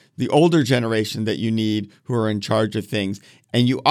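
A short speech recording, and nothing in it stands out as a technical problem; there's no fault to point to anywhere along the way.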